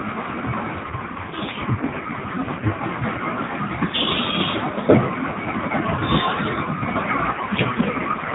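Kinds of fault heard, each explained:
AMR rate drop, 0.84–2.83 s and from 7.32 s: speech turns buzzy and synthetic, with no gap or band loss, fitting a codec step from 12.2 to 4.75 kbps.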